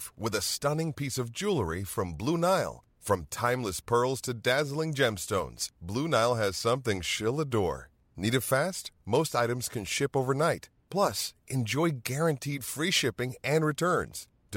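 No dropouts, clipping, glitches or other technical faults are audible anywhere in this speech recording.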